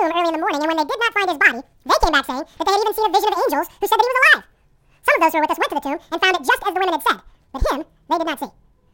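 From the first moment to the end, the speech plays at twice its proper speed and a full octave, 12 semitones, above its natural pitch. This is audio read two samples at a time (double speed): the playback side has treated each pair of samples as a single frame, as though the stream held two channels or samples twice as wide, so time is compressed by half.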